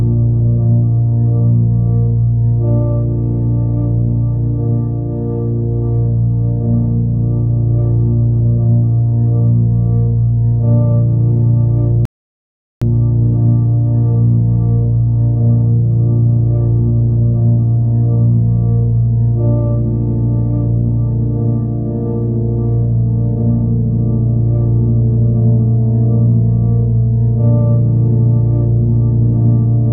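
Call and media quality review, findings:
Rebuffering stall, 12.05 to 12.82 s. Playback drops to silence for about 0.76 s, then resumes at the exact point it stopped. Nothing skipped, time added. Player buffer underrun: downloaded audio ran out, output paused until more data arrived.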